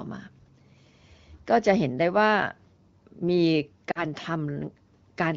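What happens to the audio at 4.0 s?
The speech briefly dips from 3.91 to 4.03 s, about 40 ms of lost AMR speech frames that the decoder concealed by repeating the last good frame at fading gain.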